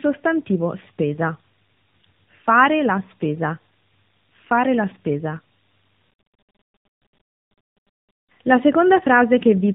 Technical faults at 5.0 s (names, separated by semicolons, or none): tandem speech coding